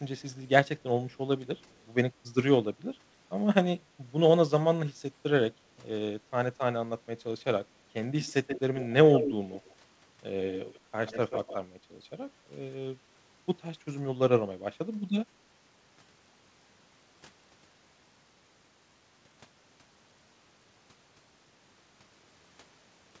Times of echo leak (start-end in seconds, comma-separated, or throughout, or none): 0.19-0.36, 1.10-1.17, 1.73-1.80, 8.22-9.75, 10.54-10.80, 11.07-11.56